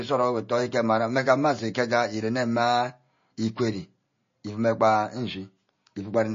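Throughout the speech, a hard ceiling near 7.2 kHz and swirly, watery smearing of s sounds and attacks show plainly, fitting heavy, likely low-bitrate MP3 compression; spectrograms show flickering high-band patches.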